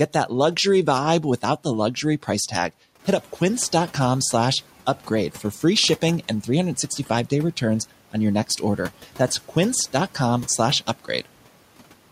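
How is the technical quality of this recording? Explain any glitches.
One glitch stands out, at 2.99 to 3.21 s, where the background noise in the room rises by about 12 dB at around 3 s and then settles roughly 21 dB below the speech. The noise suppressor catching up is heard across that 220 ms window. Its noise estimate still reflects the quieter floor, so the louder noise passes through with little reduction. As the estimate adapts, the suppression deepens by about 8 dB, and the louder noise audibly sinks back down instead of being held steady from the moment it appears.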